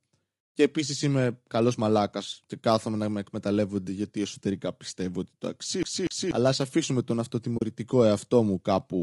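Throughout the recording, the speech was likely squeezed through low-delay AAC compression (AAC-ELD) at a low rate, consistent with around 32 kbps. Its short frames resolve the voice's harmonics poorly, so the speech sounds plainly rough and grainy, with noise filling between harmonics and a thin, synthetic-sounding top band.

From 5.83 to 6.31 s, after "εσωτερικά πιστεύω ότι το", playback behaves like a CD stuck on one turn. It jumps back by the same 0.24 s loop on each pass, so that snippet repeats twice with a brief mute at every jump, giving the quick, even stutter of a skipping disc before "ας αφήσουμε τον".

At 7.57 to 7.62 s, after "ας αφήσουμε τον", there is AAC frame loss with muting. A 40 ms stretch of coded data, which fits two lost frames, was replaced with silence. The overlapping windows fade the sound out and back in, leaving a soft-edged gap.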